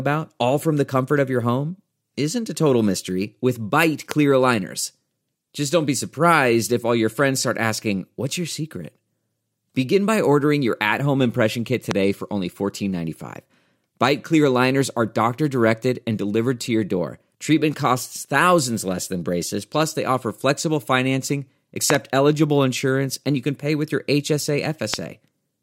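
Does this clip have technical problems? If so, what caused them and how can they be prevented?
Yes, there are five loud pops in this speech, each roughly 20 dB above the voice: 4.11–4.14 s after "total mystery with bite", 11.91–11.93 s after "at home impression kit", a double pop at 21.90–21.97 s after "they offer flexible financing", and one at 24.94–24.96 s. They're likely voltage spikes from a plug, a switch, static or a driver glitch, riding on top of the speech. To prevent them, keep cables and connectors secure, ground and shield against static, and leave switches alone while recording.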